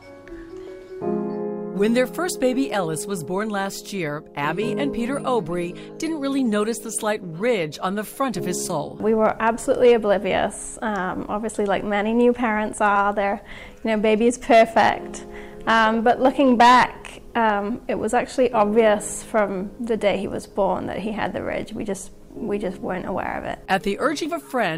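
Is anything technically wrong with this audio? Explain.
Yes. Compressed frames are skipped four times: at 0.67 s, 8.69–8.72 s, 12.95 s and 24.25–24.29 s. Whole frames never reach playback, so the audio jumps ahead by a short stretch, from about 70 ms to about 150 ms, which fits 20 ms frames.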